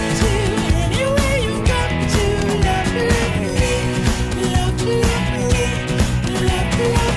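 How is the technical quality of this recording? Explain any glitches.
Nothing stood out as a technical problem on listening, and there are no glitches to explain.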